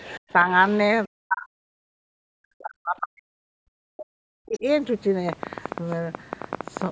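Other side's voice leaking through appears from 0.0 to 0.19 s and again from 0.47 to 0.78 s: a faint second voice, roughly 20 to 25 dB below the main speech. The loudspeaker's playback likely reached the microphone and the echo canceller did not fully remove it.

Speech suppressed in double talk follows from 1.06 to 1.8 s and from 2.19 to 4.65 s. The talker's voice sinks, at its deepest by around 40 dB, for roughly 2.7 seconds in all. With both sides talking at once, the canceller likely could not separate them and turned everything down. A brief scrap of the leaking voice returns at 4.54 to 4.59 s, near the end of that stretch.

Train of clicks runs from 5.29 to 6.87 s: about twenty sharp ticks at an uneven pace averaging 13.4 per second, peaking around 10 dB above the sound. Interference from nearby equipment or a faulty connection or power supply is the likely source.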